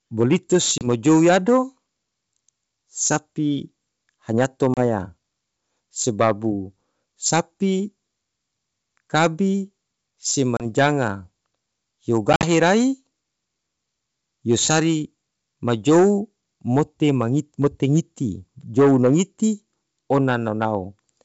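Hard-edged dropouts break the speech at 0.78 s, 4.74 s and 10.57 s, each about 30 ms of missing audio, then a longer scattered gap from 12.33 to 12.45 s losing about 70 ms, the longest run 50 ms. After each hole the speech comes back slightly distorted, settling within tens of milliseconds. This is packet loss on an ADPCM call. A few packets at a time went missing and were filled with silence. That threw the receiver's adaptive predictor and step size out of line with the sender's until they caught up. The wideband G.722 coding stays clear up to 7 kHz between the gaps.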